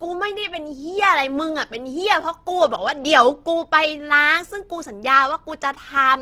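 Opus compression runs through the whole speech clip, its likely cause a low-rate Opus encode in music mode. Band energies are kept but starved bands are filled by folding or noise, so the fullband sound turns grainy and rough, fitting a rate near 16 kbps.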